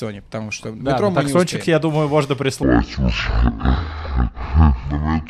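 A section at the wrong speed runs from 2.63 s to the end: the audio drops to about half speed (0.503x), sounding slow and deep, roughly ten semitones lower, likely from that stretch being played back against the wrong clock.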